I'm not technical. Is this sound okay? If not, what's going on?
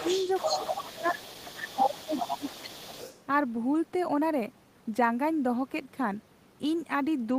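No. From the start to about 3.2 seconds, a second person's voice sits underneath the main talker, almost as loud. This is the other side's voice leaking through: likely the talker's loudspeaker fed into their microphone and the echo cancelling didn't remove it all.

Between 0.5 and 1.37 seconds, and again between 1.75 and 2.85 seconds, the main talker sharply fades or breaks up for parts of each stretch. This is speech suppressed in double talk: with both people talking at once, the echo cancelling likely turned down the talker along with the echo.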